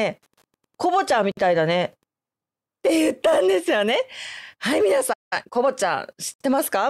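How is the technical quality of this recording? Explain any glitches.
The recording has four kinds of glitch: interference at the start, two short dropouts at joins, and a stall followed by a hurried stretch.

From 0.0 to 2.06 s a steady ticking runs under the speech at about ten clicks per second, around 45 dB below it. This is Wi-Fi interference. The ticks repeat every 102.4 ms, the period of a Wi-Fi beacon, which points to a nearby radio whose transmissions the audio circuitry rectified into audible pulses. It stops at 2.06 s.

At 1.32 to 1.37 s and again at 6.34 to 6.40 s the speech drops out briefly, for 56 ms and 66 ms, then resumes where it left off. Each is a gap at a join of encoded pieces. The audio was encoded in separate chunks and spliced without trimming, so each encoder's start-up delay and final-frame padding stayed in as silence. The codec softens the edges of each gap.

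At 5.13 s the speech stops mid-flow for 182 ms and picks up again at 5.33 s. This is a playback stall, likely caused by the player running out of buffered data or its thread being blocked, which left the output silent until it recovered. The break is long enough to hear clearly as an interruption.

Right after the stall, from 5.33 to 5.69 s, the speech runs at 1.5 times normal speed but keeps its normal pitch. This is time-compressed catch-up. To clear the backlog built up during the stall, the player cut out small slices of audio and cross-faded across them. That shortens the material without transposing it, so the speech sounds rushed rather than higher.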